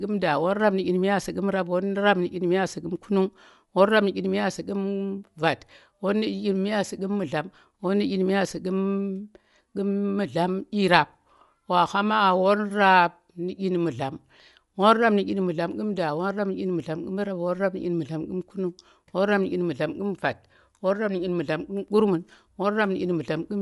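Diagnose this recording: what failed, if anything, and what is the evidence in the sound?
Codec stage: throughout, the speech has a plainly grainy, breathy edge and nothing above 11.5 kHz. This is likely Bluetooth LC3 compression noise-filling its discarded upper spectrum.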